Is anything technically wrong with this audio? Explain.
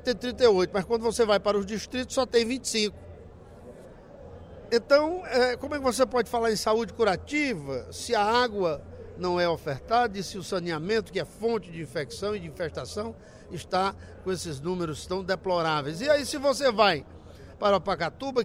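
No, nothing technical stands out here, and the audio sounds fine the whole way.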